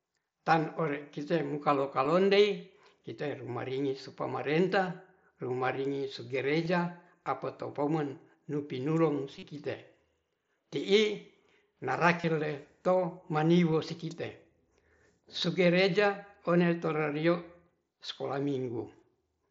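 Concealed Bluetooth headset packet loss at 2.04, 6.65, 9.39–9.43, 12.21–12.24 and 13.72 s: dropped packets were filled by repeating recent waveform, so the longer gaps buzz at steady level and show as copied periodic cycles with flat, smeared harmonic bands.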